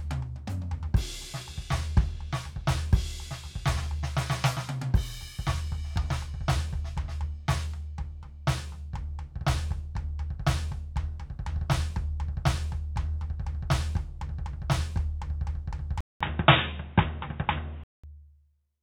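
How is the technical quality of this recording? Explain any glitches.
The music has one glitch. From 16.01 to 18.04 s, a 200 ms silence is followed by dull, boxy sound with nothing above 3.8 kHz. A small level shift and faint new background noise come with it. The likely cause is an input switched to a poorer device with a narrower band.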